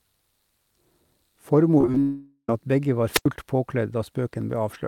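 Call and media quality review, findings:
Repeated packet loss (robotic sound), 1.78–1.97 s: choppy speech with pieces missing. Five short gaps, longest about 21 ms, each patched by stretching the previous sound. Roughly 42% of that stretch is concealment, about 70 ms of real audio gone. Jitter buffer/network path.

Long network dropout, 2.00–2.49 s: buzzy fill that fades, then a brief silence of about 40 ms before "at begge". Around 480 ms never arrived and got papered over by concealment. Likely a network stall; the lost speech doesn't come back.

Wireless microphone squelch dropout, 3.11–3.26 s: hiss swells, then a near-silent hole of about 86 ms, then speech returns. The analogue FM mic's RF faded and the receiver squelch muted output. Check antenna placement and range.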